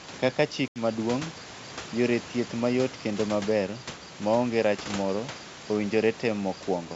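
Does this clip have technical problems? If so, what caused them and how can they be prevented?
Yes. Packet loss on an ADPCM call cuts a hard-edged silent hole from 0.68 to 0.81 s, covering about 80 ms of speech, a few packets' worth. The receiving decoder's predictor and step size lose track of the sender's. Speech returns with some distortion, then settles within tens of milliseconds. Prevention: use a jitter buffer with loss concealment and reset or resynchronise the decoder state after lost packets.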